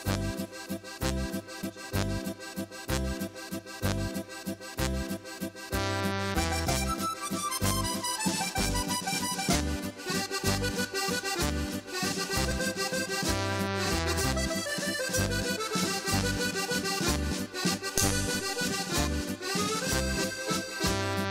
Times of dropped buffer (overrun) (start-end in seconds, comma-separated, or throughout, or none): 1.63, 12.51